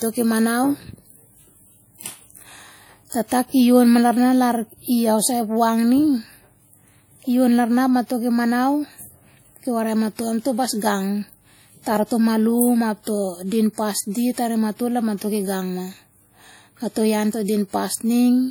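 Pre-echo at 3.28 to 3.32 s in this speech clip: a short hiss of about 38 ms arrives just ahead of the sharp onset before "ki yon ma larna", and that attack sounds softened and smeared. The codec spreads its coding noise across a whole transform block, so noise scaled to the loud onset late in the block also fills the quiet gap before it, where nothing masks it. WMA compression is audible throughout and is the likely cause of that pre-echo. The damage is plain, with a ringing, washy quality and hiss that swells and fades with the speech level, which fits a low bitrate around 48 kbps. Long transform blocks smear quantisation noise over tens of milliseconds, and weak spectral components are dropped entirely, thinning detail even though the band still reaches about 20.1 kHz.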